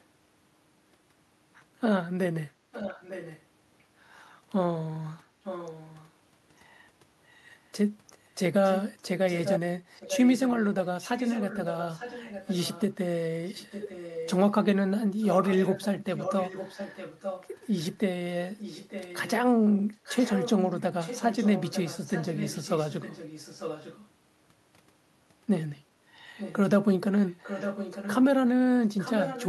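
Echo leak at 2.72–3.41, 5.44–6.11, 8.64–24.08 and 26.38–29.49 s. A faint copy trails the speech by 0.9 s, later louder. A loudspeaker echo likely escaped cancellation.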